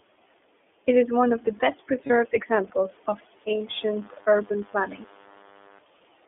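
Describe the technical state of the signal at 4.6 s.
At 4.6 s the speech carries a DECT cordless phone buzz, which begins at 3.67 s, just after "examples of", and lasts until 5.79 s. A nearby DECT handset or base transmits a short radio burst every 10 ms, and the audio circuitry rectifies it into a 100 Hz buzz with a dense ladder of harmonics, sitting well below the speech level. Mains hum at 50 or 60 Hz is smoother and nearly pure. This buzz is thin and raspy, is locked exactly at 100 Hz, and runs steadily through its span.

Underneath, the whole signal passes through the iLBC codec. The band is confined to roughly 250 Hz to 3.5 kHz, so the speech lacks both its low body and everything above it. Each frame's excitation is coded on its own, and the frame timing fits 30 ms frames at about 13.3 kbps. That independent coding gives a plainly audible rough, slightly synthetic grain. A plain telephone band-limit would be muffled but clean, without this buzzy texture.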